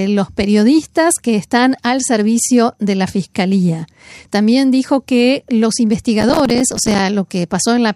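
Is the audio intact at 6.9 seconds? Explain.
No. At 6.9 seconds the speech is torn by a gritty burst of crackle that runs from 6.21 to 6.99 s, with tiny hard-edged dropouts peppering the sound. This is processor overload crackle: the system apparently couldn't finish its audio buffers in time and missed deadlines again and again. Each late buffer was replaced by silence, and the rapid gaps point to buffers of around 5 ms, about 30 missed over that stretch.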